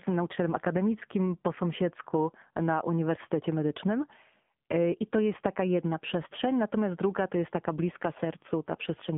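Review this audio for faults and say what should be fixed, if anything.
The whole clip carries AMR narrowband mobile codec damage. The speech is confined to roughly 150 Hz to 3.5 kHz, so sibilants and breath detail are gone. The codec rebuilds each 20 ms frame from a vocal-tract filter excited by a few pulses, and at this low rate that model is clearly audible as a buzzy, synthetic edge on the voice. The degree of coarseness fits a low mode around 7.4 kbps. To prevent it, capture or route the audio over a wideband path instead of a narrowband mobile call leg.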